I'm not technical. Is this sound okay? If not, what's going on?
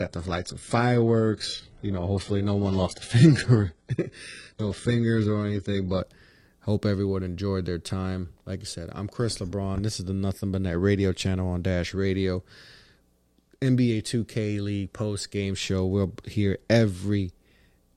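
No. The first six seconds have a fault called an adaptive stream starting at a low bitrate. The player began with a cheap, low-quality version of the speech so it could start quickly. Until about 6.0 s, the speech sounds dull and watery, with smeared, artificial-sounding highs, and nothing above 11.1 kHz is heard. At 6.0 s the player switched to a better version. The sound jumps to clearer quality with no gap.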